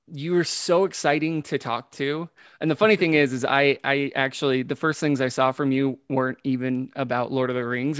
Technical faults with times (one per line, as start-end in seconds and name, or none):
none